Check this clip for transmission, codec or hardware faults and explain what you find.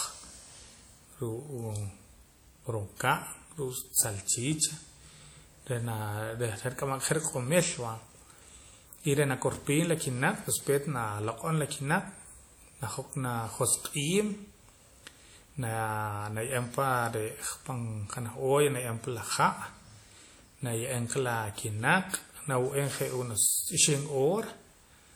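One codec fault runs through the whole clip. Throughout, the speech rings and sounds washy, with hiss breathing alongside it, likely WMA compression from a long-block transform coder at a low bitrate near 48 kbps.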